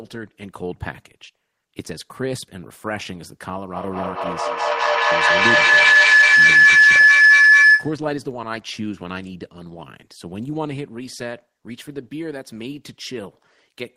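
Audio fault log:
3.75 to 8.06 s, feedback howl: the speech gets swamped by a ringing tone near 1.5 kHz that swells to about 16 dB above the talker, pulsing roughly every 200 ms. That's a mic-to-speaker loop gaining level each pass, narrowing onto its favourite frequency until it's cut.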